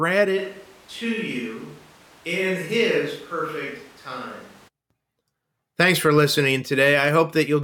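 From 0.39 s to 4.67 s the speech turns abruptly roomy and hollow, thinner in the bass and roughly 5 dB quieter, with background noise rising to about 25 dB below the speech. This is likely a switch to a distant microphone after the close one dropped out.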